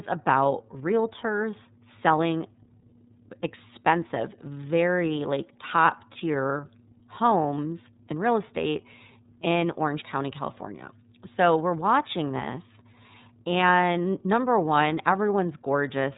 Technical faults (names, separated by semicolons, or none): iLBC codec